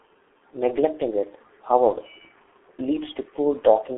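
Throughout, the speech carries heavy G.723.1 codec damage: nothing above 3.8 kHz, and hoarse, smeared consonants from coarse 30 ms frames, unlike clean telephone band-limiting.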